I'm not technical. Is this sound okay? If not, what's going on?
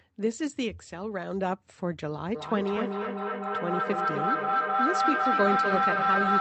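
No. From 2.35 s to the end, there is a feedback howl. Two devices on the same call seem to be in one room. Sound loops between them and grows each time. It becomes a high whistle near 1.5 kHz, the loop repeating about every third of a second, louder than the speech.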